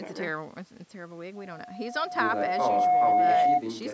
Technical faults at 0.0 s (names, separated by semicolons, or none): none